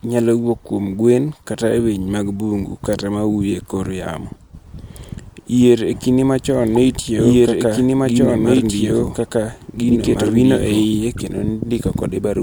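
Speech with two separate problems. First, corrupt frames decoded: damaged compressed frames were played back anyway, so misread gains and codes throw energy into the wrong frequencies as short chirps or noise bursts. They land at 5.03 s (a faint single-frame blip), 6.76 to 6.78 s (much louder, spanning a few frames), 9.27 s (much quieter, around -50 dBFS), and 11.13 to 11.21 s (the loudest and longest, around -10 dBFS over several frames). Second, from 5.93 to 10.85 s there's a doubled audio track: a full-band copy of the speech runs about a second and a half behind the original at roughly the same level. It has no decay or room colour, and it cuts in and out abruptly at both ends. The likely cause is the signal being picked up a second time through a slower path, or an edit that left two out-of-step copies stacked.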